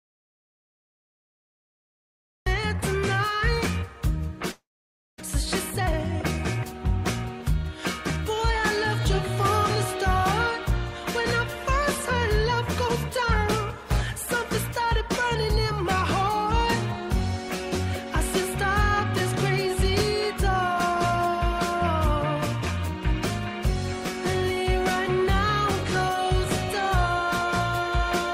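The audio opens in silence, with no room tone, until sound cuts in mid-flow at 2.46 s. This is an audio dropout to silence already under way when the clip starts, likely from the input being lost while the recorder kept writing silence.

From 4.51 to 5.22 s there is a long network dropout. The last sound carries on as a fading buzz or hiss for about 0.69 s, including about 0.54 s of silence. The audio then resumes with about 0.4 s of material gone. This points to packets that never arrived, with the receiver concealing the gap. The delay afterwards shifts by roughly 300 ms.

Three jitter buffer speed-ups follow, each running the audio faster at unchanged pitch. From 5.76 to 6.89 s the speed is 110%, which sounds hurried, and about a tenth of a second is removed. From 7.63 to 8.99 s it is 103%, with about 40 ms removed. From 14.79 to 15.66 s it is 105%, with about 50 ms removed. In each case the receiver shortened its buffered backlog by cutting out pitch-period-length pieces in quick succession.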